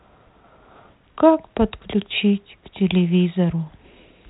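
No technical faults are audible.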